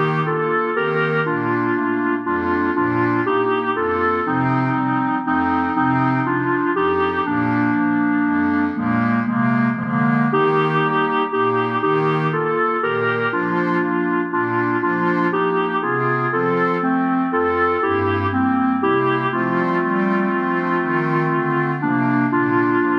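At 9.82 s, repeated frames: a 70 ms block of compressed audio plays twice, producing a brief stutter and lengthening the audio by 70 ms.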